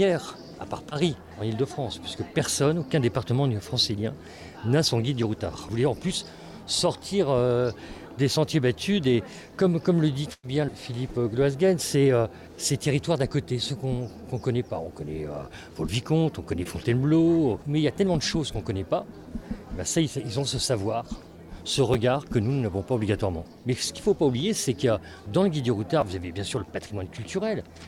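At 0.89 to 0.93 s and again at 16.63 to 16.67 s, short concealed packet loss fills about 20 ms of missing audio by extending the previous sound. Each is a brief smear rather than a hard repeat. At 8.33 s a repeated buffer plays one 10.67 ms block twice, which fits a 512-sample buffer. The hard join gives a click, not a smear. From 10.33 to 10.45 s a burst of packet loss removes about 100 ms. The sound is held, fades to near silence and resumes further on, longer than any tick. Further repeated buffer clicks fall at 21.94 and 26.01 s.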